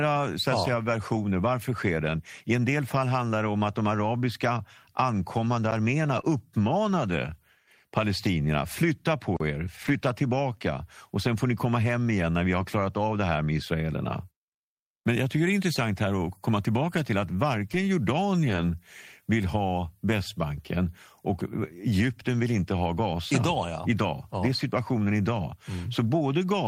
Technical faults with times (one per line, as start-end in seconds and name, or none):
5.71 block of digital silence
6.17-6.19 lost packet rebuilt from error correction
6.21-6.25 short concealed packet loss
9.36-9.40 block of digital silence
9.85-9.95 lost packet rebuilt from error correction
12.61 lost packet rebuilt from error correction
17.69-17.75 lost packet rebuilt from error correction